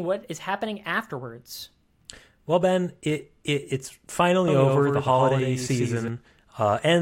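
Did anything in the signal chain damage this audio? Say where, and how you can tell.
Yes. A doubled audio track runs from 4.48 to 6.08 s, starting right after "it it it's". A second, full-band copy of the speech trails the original by roughly a tenth of a second, about 5 dB quieter. It has no reverberant tail or room colour and switches on and off abruptly, so it isn't an acoustic echo. The likely cause is the same signal being captured again through a slower path in the driver or buffer stage.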